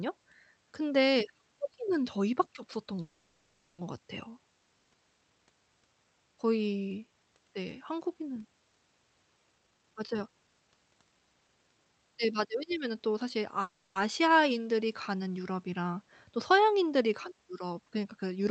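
Call audio freeze hits this speech recording at 3.01–3.80 s and 13.62–13.98 s. The last sound is stretched into a fading buzz or hiss, likely because delayed packets emptied the jitter buffer, and the speech then resumes with nothing lost. Jitter buffer speed-up runs from 9.54 to 12.54 s. The buffer sheds the backlog by cutting repeated pitch-period slices, so speech plays about 126% fast at unchanged pitch, losing roughly 0.7 s. The call path band-limits the audio at 8 kHz, which fits Opus coding.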